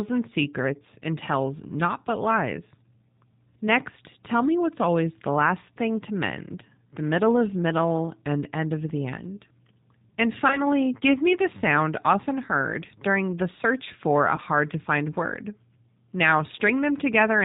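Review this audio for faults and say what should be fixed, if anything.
G.729 codec damage runs through the whole speech recording and is plainly audible. The codec rebuilds the voice from a vocal tract filter, a pitch predictor and a few pulses per 5 ms subframe, which fits an 8 kbit/s G.729A stream, so the voice sounds rough and slightly synthetic. On a spectrogram, energy stops sharply at 4 kHz, and harmonics look smeared and grainy rather than cleanly striated. To prevent it, use a wideband codec such as Opus or G.722 for this call path.

VoIP packet loss concealed by the speech codec occurs twice, at 10.48 to 10.61 s and at 14.36 to 14.41 s. Each gap fits one lost 20 ms packet. The decoder filled the gap by repeating its last pitch and filter with falling gain. That produces a brief stretched sound, a buzzy tone or a coloured noise that fades. The damage outlasts the loss, especially at 10.48 s, because later frames build on the guessed state. 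On a waveform this appears as a short, regular, decaying stretch, and on a spectrogram as flat, unchanging harmonics that fade before normal speech resumes. To prevent it, reduce loss on the network path with QoS and add a jitter buffer or forward error correction.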